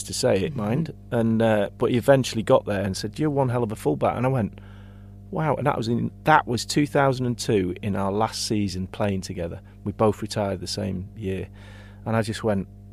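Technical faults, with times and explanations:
Throughout, mains hum: the 50 Hz power line leaks in through a ground loop or transformer, adding a steady low drone roughly 20 dB under the speech.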